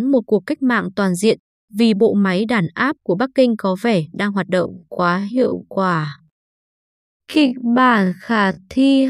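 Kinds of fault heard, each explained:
Time-stretched section: from about 4.52 s to the end, the speech drops abruptly to roughly half speed while the pitch holds steady, so it drags. That's likely software stretching the audio to fill a length by repeating short pieces rather than resampling it.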